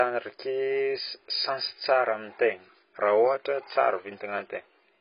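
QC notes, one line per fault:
throughout: AAC compression. Nothing reaches above 5.1 kHz, so the speech sounds dull and smeared, with heavy coding damage across the clip. The likely cause is AAC-LC at a rate fitting roughly 16 kbps, where the encoder drops the top band to spend scarce bits lower down.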